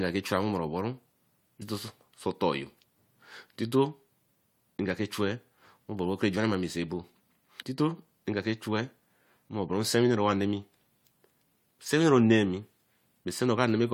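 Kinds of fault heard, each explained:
Damaged data in a compressed stream: corrupted bytes in the encoded speech make the decoder misread a frame and lose sync until it finds a valid frame header, producing short blips at 1.61 s and 7.60 s, each under 20 ms. On a spectrogram each shows as a thin vertical break that interrupts the harmonic pattern of the speech. On the waveform it appears as a brief, jagged burst or discontinuity that doesn't follow the surrounding signal.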